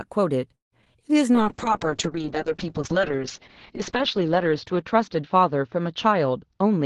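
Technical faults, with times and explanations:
0.55–0.97 s, repeated packet loss (robotic sound): four gaps in quick succession, the longest about 166 ms, patched by extending prior sound; choppy sound with pieces missing.
1.34–6.86 s, call bitrate drop: the Opus rate falls from 32 to about 6 kbps, bandwidth narrowing from 12 kHz to 8 kHz; speech turns rough, watery and duller.
6.43–6.81 s, jitter buffer speed-up: an oversized buffer is trimmed by cutting short pitch-period segments, roughly 70 ms removed; speech runs about 14% faster at unchanged pitch, sounding hurried.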